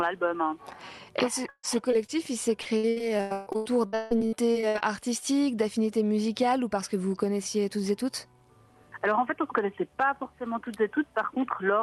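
Burst of packet loss, 1.49 to 1.65 s: a run of packets carrying about 140 ms of audio never arrived in time to be played. The receiver extended the last sound it had and let it decay across the hole. The stretch sounds like a held, fading continuation that thins out to roughly 50 ms of silence before the audio picks up again further along, with the intervening material gone.

Short concealed packet loss, 1.91 to 1.94 s and 2.06 to 2.10 s: each time, about 20 ms of audio failed to reach the decoder, and the gap was patched by extrapolating from the preceding sound and then crossfading back into the real signal. Each one is heard as a quick smear or wobble rather than a clean dropout.

Repeated packet loss (robotic sound), 2.62 to 4.82 s: packets went missing over and over across this span, 17 gaps in all, totalling about a second of lost audio, with the longest hole 160 ms. Each gap is filled by stretching the last sound, and the next gap arrives before the signal settles, so 44% of the stretch is synthetic fill. 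The result is a choppy texture with pieces dropping out. This is heard through a WebRTC call path using Opus, whose band limit near 12 kHz and coding noise fit a bitrate around 40 kbps.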